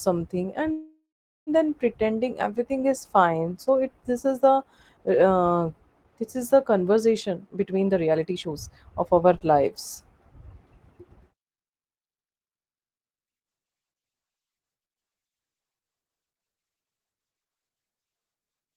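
A speech clip in which the sound at 0.71 s stretches into a fading buzz or hiss that settles into about 0.44 s of silence before resuming at 1.50 s with "then pretending". This is a call audio freeze, likely from delayed packets emptying the jitter buffer. About 0.76 s of filler was inserted, with nothing lost. From 7.21 to 9.24 s the speech runs hurried at unchanged pitch, at about 128% speed. This jitter buffer speed-up comes from the receiver trimming many pitch-period-sized slices to shed excess buffered delay, removing roughly half a second in total. Just after, from 9.38 to 9.44 s, a sound is briefly held too long with a slight buzz or dip. This short stall from a late packet happened when the buffer ran dry and the last sound was stretched by about 28 ms until the packet arrived, then playback continued without loss.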